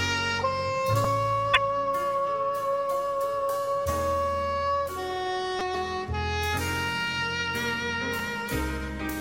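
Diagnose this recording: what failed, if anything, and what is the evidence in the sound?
The driver or buffer stage failed with a repeated buffer at 1.04 s, 5.59 s and 8.19 s. Each time, new audio did not arrive in time, so the last block was played again. That block is about 5 ms long, which points to a small playback buffer. It repeats once at 1.04 s and 8.19 s, and three times at 5.59 s. On the waveform, identical 5 ms segments sit side by side with hard joins. The spectrogram shows brief vertical clicks or a short buzz.

The codec stage shows damaged data in a compressed stream from 1.54 to 1.57 s and from 5.71 to 5.75 s. Corrupted bytes made the decoder misread frames and lose sync until it found a valid frame header. Each event is heard as a chirp or blip of about 40 ms. On a spectrogram these appear as smeared, blocky energy unrelated to the surrounding material. The waveform shows an abrupt, incoherent burst with discontinuities at both edges.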